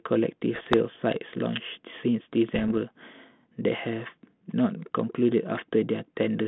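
Around 0.54 to 0.74 s and again from 2.52 to 2.72 s there are bit errors on an ADPCM link, heavier in the first burst. Flipped bits knock the decoder's step size and prediction off, so each error rings on as pops, rough crackle and little level jumps over the band-limited, narrowband telephone sound.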